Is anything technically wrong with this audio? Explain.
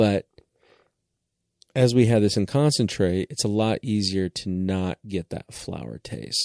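No, nothing is technically wrong with this audio.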